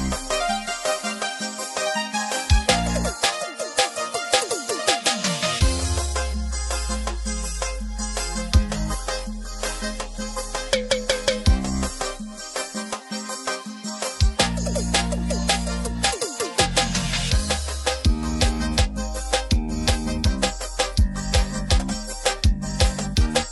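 No technical faults are audible anywhere in this audio.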